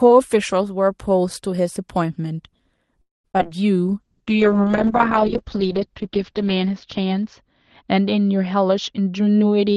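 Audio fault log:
3.01–3.26 s: call audio freeze. The sound stretches into a fading buzz or hiss, then goes silent for about 170 ms. It picks up exactly where it stopped, so nothing is lost, but the call runs 228 ms later. Delayed packets likely drained the jitter buffer.
3.32–3.36 s, 3.38–3.53 s and 3.43–3.47 s: short concealed packet loss. Each time about 20 ms of audio never arrived. The receiver extended the preceding sound to cover it, then blended back. This leaves brief smears or wobbles. The middle one adds roughly 10 ms.
4.01–9.76 s: call bitrate drop. The Opus encoder fell from 32 to 8 kbps, staying at the lowest rate for about 2.3 s. Its bandwidth narrowed from 12 kHz to 8 kHz. Coarser coding and the lost top end make the sound rough, watery or muffled.
8.54–9.43 s: jitter buffer speed-up. Too much audio had built up in the buffer. The receiver cut many short pitch-period pieces, removing about 70 ms in total. 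Playback runs at 108 percent speed with unchanged pitch, so this stretch sounds hurried.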